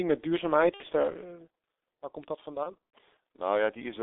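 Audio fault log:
throughout: G.723.1 codec. Heavy low-bitrate coding at about 6.3 kbit/s in 30 ms frames, over a line band of roughly 300 Hz to 3.6 kHz, strips the highs and tracks the voice coarsely, so speech is muffled and hoarse with smeared consonants.
0.74 to 0.84 s: VoIP packet loss concealed by the speech codec. Two frames, 60 ms of audio, went missing and the decoder filled them by extending its last pitch and filter with falling gain, giving a brief, fading stretch before speech recovers.
2.63 to 2.75 s: VoIP packet loss concealed by the speech codec. Five frames, 150 ms in all, were lost scattered over about 300 ms, the longest gap 90 ms, so concealment repeatedly smears the sound and weakens it until frames resume.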